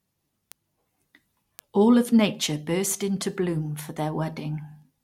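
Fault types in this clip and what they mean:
Word clock ticks: the receiving device runs on its own clock, drifting roughly 40 ppm from the sender's, so about every half second a single sample slips. In this speech that produces about ten sharp ticks at a steady rate from 0.52 to 4.82 s.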